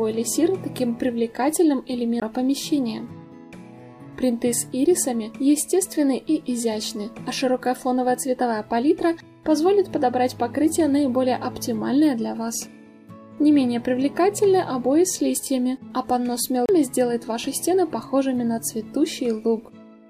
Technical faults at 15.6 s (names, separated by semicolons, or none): none